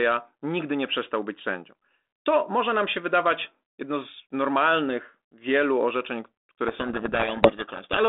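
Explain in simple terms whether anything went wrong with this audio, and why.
From 6.68 s to 8.02 s, right after "z normalnych wielu orzeczeń", the speech drowns in harsh, grinding distortion. This is a codec payload misread: the two ends of this telephone-quality G.726 link disagreed on the order of bits inside each code word, so the receiver decoded scrambled values.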